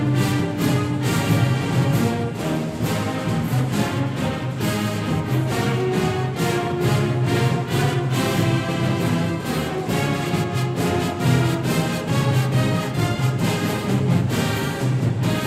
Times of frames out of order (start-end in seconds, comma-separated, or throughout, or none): none